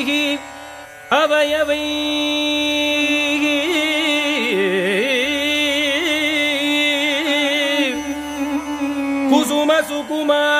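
Listening through the audio, nothing stood out as a technical fault at any point.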